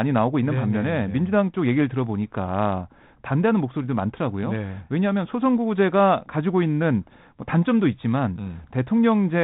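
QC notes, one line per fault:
No faults found in this speech recording.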